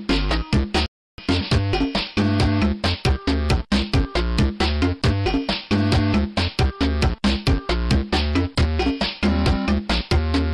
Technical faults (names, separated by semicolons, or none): rebuffering stall